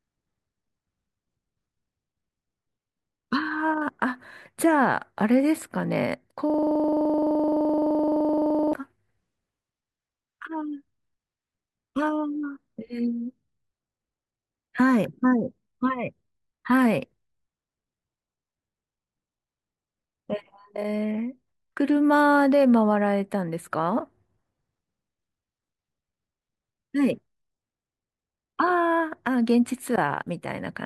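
From 6.50 to 8.73 s, a system hang loop repeats one 42.67 ms slice about fifty times. It makes a rattling 23.4 Hz buzz, which fits a 2048-sample buffer.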